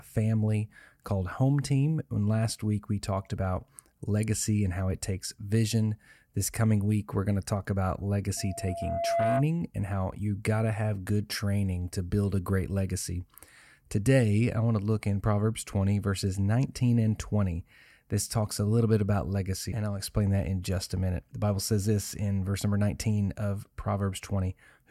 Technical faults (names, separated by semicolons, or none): loudspeaker feedback squeal